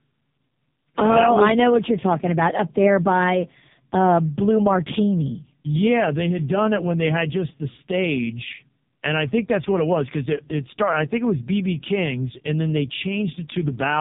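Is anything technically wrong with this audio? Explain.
Yes. The whole clip has passed through the AMR narrowband mobile codec, and the damage is heavy. The audio is band-limited, with nothing above 4 kHz. The codec rebuilds speech from a vocal-tract model excited by a few pulses in each 5 ms subframe. At very few bits, that model is crude. The voice sounds buzzy, thin and synthetic throughout, which fits one of AMR-NB's lowest modes, around 5.15 kbps.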